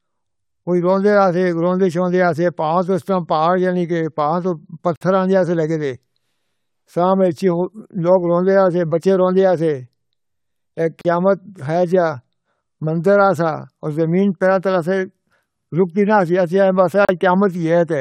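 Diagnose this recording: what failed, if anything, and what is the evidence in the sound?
The failure is at the codec stage: the recording was encoded in separate pieces roughly 6.0 s long and joined without trimming, so each join keeps the encoder's start-up delay and last-frame padding as a gap at a join of encoded pieces. The speech drops out abruptly, with smeared edges, for 52 ms at 4.96 s just after "پاہ تو", then for 37 ms at 11.01 s and 37 ms at 17.05 s. Each time it resumes exactly where it stopped.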